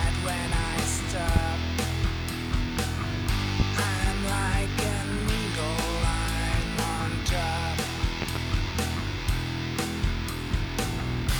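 A loud pop hits at 1.36 to 1.39 s, another at 3.60 to 3.63 s, then a double pop from 8.22 to 8.39 s. Each peaks well above the sound, roughly 15 dB. The cause is likely a sudden voltage spike, such as static or a switch. The sound continues underneath.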